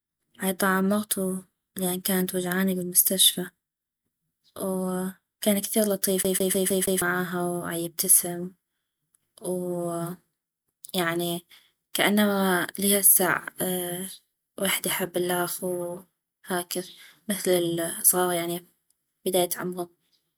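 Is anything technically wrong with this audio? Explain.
Yes. From 6.23 to 7.02 s the speech breaks into a rapid, even stutter: the same short fragment, about 158 ms long, plays five times in a row, each repeat clipped by a brief mute at the jump. This is the CD stuck on one turn fault. A scratch knocks the laser back one track at the same point on every rotation, so playback keeps returning to one small stretch of audio before moving on.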